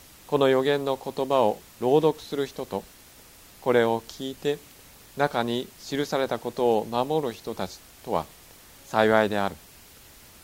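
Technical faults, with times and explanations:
No technical faults detected.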